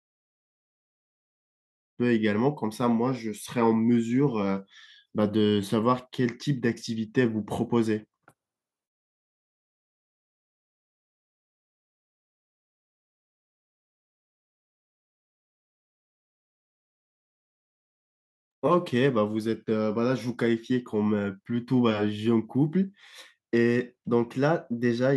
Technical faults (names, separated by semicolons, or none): none